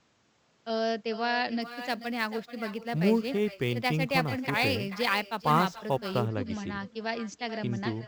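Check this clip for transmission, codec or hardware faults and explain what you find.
Two faults are audible in this speech: an echo with no canceller running the whole way through, and sample clock jitter in the middle of the clip. Both sit on top of an Opus call path whose top end stops at 8 kHz.

Echo with no canceller, throughout: every phrase is trailed by a quieter, thinner copy roughly 0.4 s later, about 11 dB below the original. The far end's loudspeaker is feeding its microphone, and nothing subtracts that return before it crosses the network again.

Sample clock jitter, from 1.62 s to 6.28 s: a gritty hiss rides on the speech, strongest on loud and bright sounds and gone in the pauses. The converter clock is wobbling by something like ten microseconds, so steep waveform slopes get sampled at slightly wrong instants, leaving an error roughly 25 dB down.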